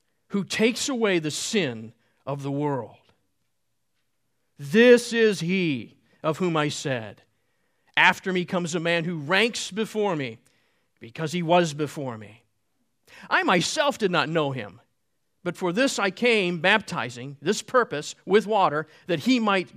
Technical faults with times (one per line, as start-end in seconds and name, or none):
none